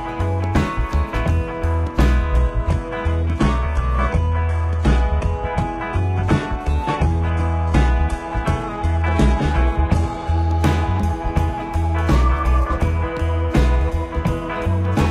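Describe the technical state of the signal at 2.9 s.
At 2.9 s the audio is inside a lower-bitrate stretch of an adaptive stream, running from 2.38 s to 10.38 s. The stream switched to a leaner version, probably because the connection slowed. The change is abrupt, with no gap. Nothing is left above 11.8 kHz, and the top end takes on a synthetic, reconstructed quality with more codec artefacts. That sound fits a switch from an AAC-LC 96 kbit/s encode to a low-rate HE-AAC stream.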